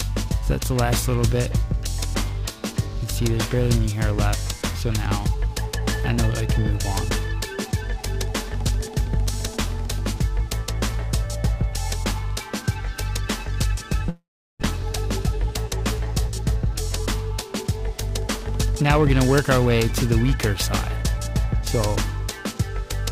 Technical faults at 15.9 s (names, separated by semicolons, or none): periodic clock jitter; jitter buffer speed-up